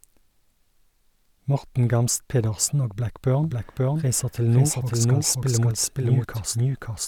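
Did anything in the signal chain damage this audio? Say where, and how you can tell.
Yes. From 3.44 s to the end, the speech is doubled. A second full-band copy trails about half a second behind, at roughly the same level. It starts abruptly and has no room colour or decay. This doubled audio track likely comes from a slower second capture path mixed in.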